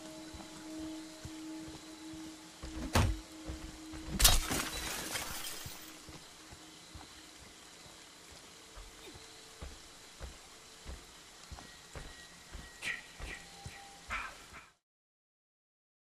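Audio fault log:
No faults heard anywhere in the recording.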